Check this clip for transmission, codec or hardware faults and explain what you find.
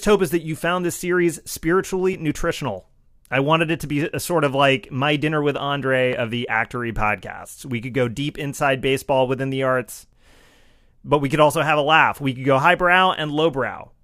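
The speech has one recurring transmission fault, a segment overlap.

Overlap between stream segments, at 2.13 s (before "nutritional I wanted it"), 6.13 s (before "of the actory podcasts") and 10.13 s (after "baseball within the arts"). Adjacent 4-second segments carry overlapping time stamps, so the player trims sound that was never duplicated, dropping about 17 ms, 17 ms and 7 ms. Each drop leaves a waveform jump, heard as a brief click or skip every 4 seconds.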